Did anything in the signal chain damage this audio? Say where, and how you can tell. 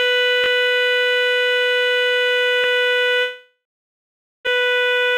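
Yes. At the driver or buffer stage there are two repeated buffer faults. From 0.44 to 0.48 s a 20 ms slice of the music plays twice more in a row, and at 2.64 to 2.66 s a slice plays once more. Each is a short stutter with a hard join at every repeat, which fits a 20 ms buffer being replayed because fresh audio wasn't ready in time. Little or nothing of the music is lost.

From 3.21 to 4.49 s there is a long network dropout, likely from packets failing to arrive. The last sound is stretched into a fading buzz, which then gives way to about 0.85 s of silence. When the music resumes, roughly 0.82 s of it is missing, and the timing has shifted by around 0.4 s as the receiver's delay readjusted. The repair covers about 1.25 s in all.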